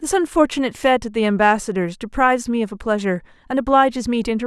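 No technical faults can be heard anywhere in this speech recording, so there is nothing to place in time order.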